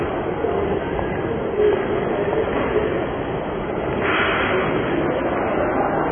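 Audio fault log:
Throughout: AAC compression, likely. Nothing above 3.4 kHz, heavy smearing and warbling, dull fizzy texture, consistent with AAC-LC at a very low bitrate near 16 kbps.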